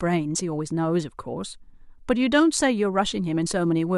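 No technical faults turn up anywhere in the clip, so there is nothing to describe in time order.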